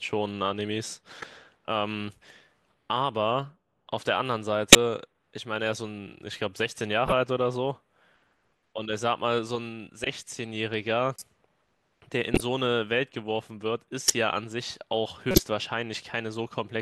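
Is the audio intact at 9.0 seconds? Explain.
Yes, the speech at 9.0 seconds is intact, with no dropout, click, distortion or other fault heard at that moment.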